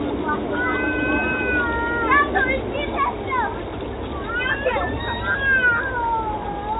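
No technical faults can be heard anywhere in the sound. It comes through a working call path, and with nothing above 4 kHz the band limit fits a narrowband G.711 mu-law codec.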